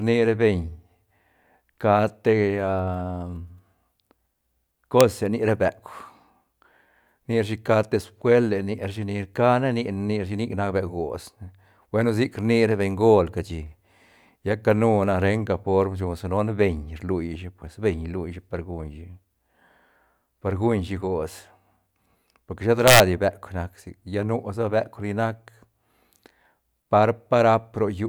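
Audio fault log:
5.01 s and 22.88 to 23.00 s: integer overflow. Loud speech peaks exceed the integer limit and wrap to the opposite sign instead of being held. The first crack, just before "ni ra beuk", sits right at the limit. The second, after "por que shet", runs about 3 dB over, giving repeated violent cracks far sharper than clipping.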